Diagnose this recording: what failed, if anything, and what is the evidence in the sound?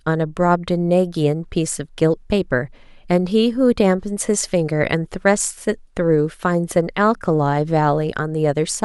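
No fault found in this recording.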